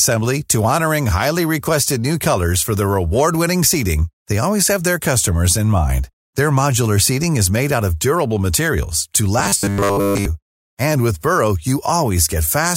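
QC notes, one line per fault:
9.39–10.25 s, robotic sound from repeated short buffers: after "of durable materials to", the speech goes to a rigid 100 Hz metallic buzz, likely from 10 ms chunks looped while fresh audio lagged.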